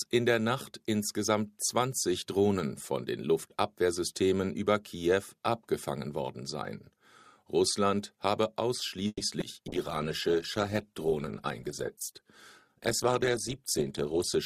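At 9.07 to 9.22 s the sound stretches into a fading buzz lasting 130 ms, ending in 30 ms of silence, then resumes intact; a call audio freeze, likely from delayed packets emptying the jitter buffer. The waveform shows a decaying tail, then a flat gap.

From 9.40 to 9.43 s, short concealed packet loss: 20 ms went missing, and 10 ms was patched by continuing the prior sound. This gives a brief smear, seen as a smoothed blip on the spectrogram.

At 9.68 s a call bitrate drop from 128 to 15 kbps lasts until 14.44 s. The audio turns muffled and rough, and the spectrogram's upper band abruptly goes empty.

Between 14.01 and 14.35 s a jitter buffer speed-up plays the audio at 109% by cutting about 40 ms of pitch periods. It sounds hurried at unchanged pitch, with the waveform's cycles unchanged in length.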